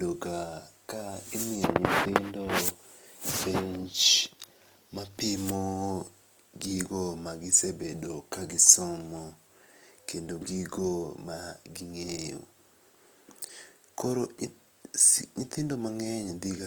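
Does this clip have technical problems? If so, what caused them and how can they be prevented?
Yes. Throughout the speech there is plainly audible Opus compression, likely from encoding in its CELT music mode at a low rate, which fits roughly 24 kbps. The encoder preserves each band's overall energy but, starved of bits, rebuilds the fine detail by copying lower bands upward or injecting noise, so harmonic parts of the speech come out rough, grainy and noisy. The full bandwidth is kept, with content reaching about 20.1 kHz. To prevent it, encode speech at a higher Opus bitrate.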